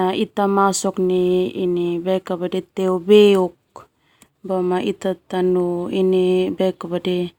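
There are no technical faults to describe in this recording.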